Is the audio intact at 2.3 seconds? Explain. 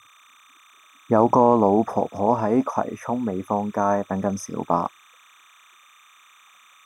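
No. At 2.3 seconds the speech carries timecode bleed, which runs through the whole clip rather than appearing as a momentary fault. Linear timecode from an adjacent track or cable has leaked into the audio path. Its square-wave signal flips between two tones near 1 kHz and 2 kHz as it encodes each frame at 30 frames per second. The result is a faint, steady chirping warble sitting well beneath the voice, roughly 35 dB down.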